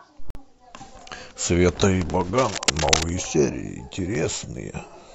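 A Bluetooth dropout at 0.30 to 0.37 s cuts the speech to silence for about 46 ms, which fits two lost frames. Packets likely arrived too late at the headphones and were discarded, so the speech resumes as if it had carried on underneath.

Cable scratch noise runs from 2.38 to 3.04 s: dense, uneven crackling bursts about as loud as the speech itself. This likely comes from a worn cable or connector being moved, its contact resistance flickering rapidly and adding that rough scratching over the speech.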